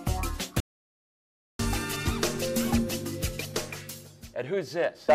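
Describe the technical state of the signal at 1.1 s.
At 1.1 s the signal is sitting right in the middle of an audio dropout to silence, which runs from about 0.60 s to 1.59 s, so roughly a second of material simply isn't there. The sound cuts off abruptly and then picks back up mid-flow, and the gap in between is dead digital silence, with no room tone at all. That points to the input likely being lost for a moment while the recording kept writing zeros.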